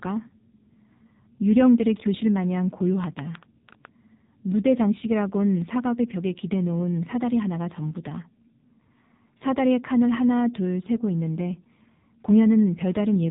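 AMR narrowband mobile codec damage runs through the whole clip. The speech is rebuilt from a vocal-tract model and a few pulses per subframe, so nothing survives above 3.8 kHz, and the heavy buzzy, synthetic tone fits a low mode near 5.9 kbps.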